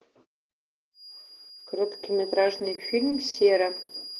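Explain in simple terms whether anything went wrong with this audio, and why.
From about 0.92 seconds to the end, a thin, steady high whistle near 4.8 kHz sits quietly behind the speech. This is a feedback whistle, likely caused by sound from a loudspeaker leaking back into the microphone and circling round, holding one pitch without growing louder.

Between 2.59 and 3.36 seconds the speech drags and hiccups four times, with each pause lasting no more than 40 milliseconds. These repeated stalls (stutter) happened because the audio data arrived late, and the player briefly stretched the last sound each time while it waited.

At 3.82 to 3.91 seconds one sound is held about 70 milliseconds too long before carrying on. This is a short stall from a late packet: one piece of data arrived late, so the player held the previous sound until it came, and nothing was lost.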